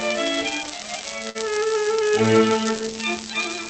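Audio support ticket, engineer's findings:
Late packet, jitter buffer ran dry at 1.29–1.37 s: short stall from a late packet. Receiver stretched prior sound about 54 ms, nothing lost, playout delay up 54 ms; held sound, slight buzz or dip.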